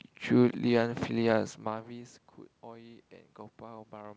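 At around a second and a half the talker moves away from the mic and the level drops by about 24 dB. From 1.63 s to the end you hear automatic gain rising. The AGC reads the input as too quiet and slowly winds its gain back up, so the voice climbs back over the following seconds and the room noise swells right along with it. The audio is band-limited at 8 kHz, as a wideband call path would leave it.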